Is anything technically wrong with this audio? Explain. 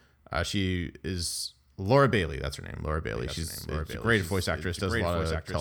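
Yes. From 3.15 s to the end there's a doubled audio track: a second copy of the speech cuts in abruptly, a few dB quieter and roughly a second behind, with no room colour. That likely comes from a slower second capture path or an edit holding two out-of-step copies.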